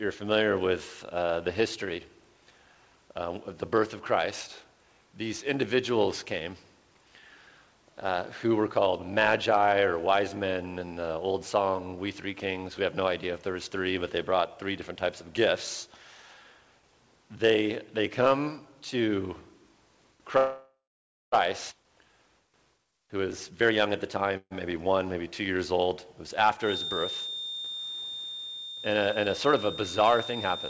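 At 20.38 s packets were likely held up in transit and the jitter buffer ran dry, causing a call audio freeze. The receiver carries the last sound forward as a fading buzz that dies into about 560 ms of silence before the stream resumes at 21.34 s. The whole stall fills roughly 0.94 s. Nothing is lost, but the audio now plays that much later than before.

Part of that backlog is then discarded at once. At 21.70–21.73 s a skip ahead drops around half a second of audio, and the two sides are joined with a splice only 6 ms long. Playback jumps forward almost seamlessly, and a short stretch of content is simply gone.

From 22.78 to 24.31 s the jitter buffer still holds more audio than its target, so it performs a jitter buffer speed-up. It repeatedly removes short pitch-period slices, about 0.3 s in total, so the sound runs at 118% of normal speed with its pitch unchanged and comes across as noticeably hurried.

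A second, brief freeze follows at 24.37–24.53 s. Delivery again likely stalls for about 136 ms, including some 50 ms of silence, and the sound picks up where it left off.

From 26.59 s to the end, the loudspeaker-to-microphone loop is likely sitting right at the edge of oscillation. This produces a feedback whistle: a thin, steady 3.6 kHz tone about 10 dB below the main sound, swelling and fading slowly in level without building up. The tone sits inside a band that stops at 8 kHz, which fits a G.722 call codec at 64 kbps.

Overlapping the whistle, at 30.27–30.47 s, another speed-up trims about 0.1 s and briefly pushes the sound to 158% of normal speed near the very end.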